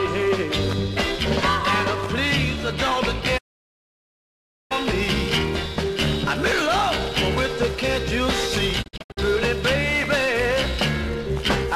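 Digital broadcast dropout at 3.37 to 4.73 s: the receiver stopped getting valid frames and muted, fading out over 20 ms into 1.3 s of silence. At 8.81 to 9.19 s it breaks up into several brief holes, the longest 72 ms. The programme resumes later, with the missing audio gone.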